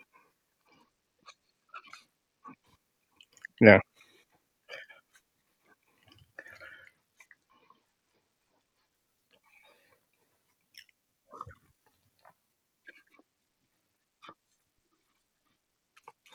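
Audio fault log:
0.67–2.66 s, 6.74–8.94 s, 13.13–16.34 s: Bluetooth SBC bit pool drop. Treble dulls and gritty noise rises as upper sub-bands lose bits, consistent with bit pool falling from 28 to about 13, near 102 kbps.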